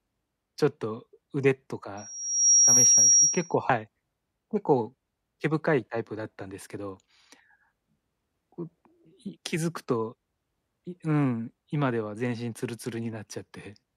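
At 1.97 s a thin, piercing tone at 5.6 kHz rises out of the speech, swelling over about half a second into a steady squeal that sits roughly 10 dB above the talker before cutting off at 3.55 s. This is loudspeaker feedback squeal: the microphone was hearing the speaker it drives, and at that one frequency the loop gain went above unity, so the tone kept feeding itself.

Moments later, from 3.70 to 3.73 s, a brief glitch interrupts the speech. That is damaged data in a compressed stream: a short stretch of the encoded data was corrupted, so the decoder misread the affected frames, lost sync, and searched for the next frame it could recognise.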